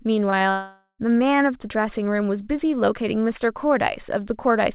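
Twice in quick succession, at 0.30 s and again at 0.38 s, part of the call arrived too late for the decoder, each leaving a 20 ms gap. These are short concealed packet losses: the receiver papered over each hole by stretching the preceding sound and then blending back into the real signal, so each one comes across as a quick smear or wobble in the speech rather than a clean break.

From 0.50 s to about 1.00 s the sound stops being real and becomes a stretched continuation of what came before, a buzz or hiss. It fades away, and roughly the last 90 ms are silence before the speech returns with about half a second of it simply gone. That pattern is the signature of a long network dropout, most likely a stretch where no packets got through at all. Throughout, the band-limited sound with nothing above 4 kHz points to a narrowband G.711-style call codec.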